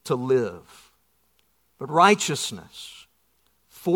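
Speech recording with no audible technical fault.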